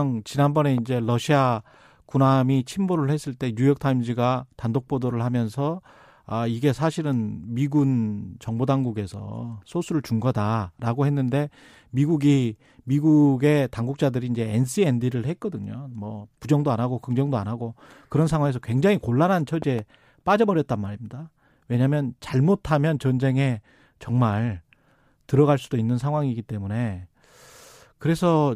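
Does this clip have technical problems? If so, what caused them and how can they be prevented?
Yes. There are two kinds of fault.

Loud pop: A sudden voltage step or pulse, likely from a plug being moved, a switch, a static discharge or a driver glitch, entered the signal path and was shaped by the circuits after it. The result is a sharp pop from 0.78 to 0.80 s and a pair of pops in quick succession from 19.62 to 19.81 s. Each rises to roughly 5 dB above the speech, which carries on underneath. Securing connections, muting before switching, and controlling static would prevent these.

Repeated frames: One compressed frame was written or sent twice, so the decoder played the same 23.2 ms of audio again at 8.29 to 8.32 s. That length fits a 1024-sample frame at 44.1 kHz. It sounds like a tiny stutter, and the clip becomes 23.2 ms longer. Checking for duplicate frames in the writing or streaming stage, using sequence numbers or timestamps, would prevent it.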